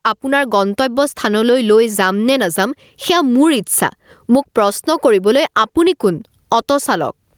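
Right from the start and all the way through, there's gain pumping on the speech. The gain swings by around 15 dB. What's likely going on is the input gain set far too hot, with a fast limiter or compressor clamping down on each loud moment. You end up with loud and quiet passages squashed together.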